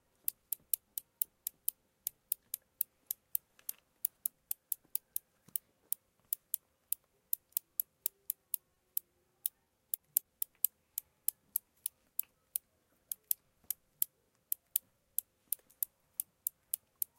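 A short stall from a late packet occurs at 8.74 to 8.78 s. A packet arrived late, the jitter buffer emptied, and the receiver held the last sound for about 20 ms before resuming. Nothing is lost, but the sound briefly hangs, and playback runs 20 ms later afterward.

Repeated packet loss (robotic sound) follows from 9.64 to 10.23 s. Five short gaps, none longer than 20 ms, were each patched by extending the preceding sound. About 90 ms was filled in, roughly 15% of the stretch, and 60 ms is missing, which makes the audio choppy.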